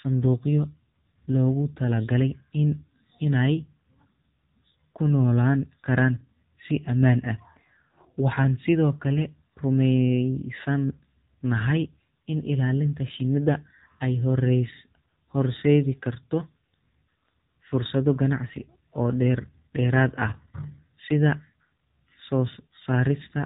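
AMR narrowband mobile codec damage runs through the whole clip, from the first second to the last. The speech has been squeezed into a model of the vocal tract excited by a handful of pulses per short sub-frame, and nothing above about 3.8 kHz survives, so the voice sounds boxed-in and telephone-thin. The damage is plainly audible as a buzzy, synthetic edge on the voice, which fits one of the lower AMR-NB modes, around 7.4 kbps.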